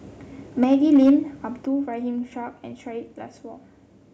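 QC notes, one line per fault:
0.62–1.11 s, microphone overload: loudest syllables have flattened peaks and a harsh crackle, with roughly 5% of samples clipped, likely input driven about 3 dB past the converter's limit.
0.64 s and 1.65 s, microphone volume stepped down: voice and background drop abruptly by about 3 dB, then about 7 dB, likely call software cutting input gain in response to clipping.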